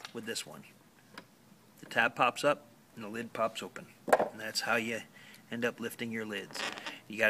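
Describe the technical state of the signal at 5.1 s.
At 5.1 s the signal is intact, with no audible dropout, distortion, glitch or other technical fault at that moment.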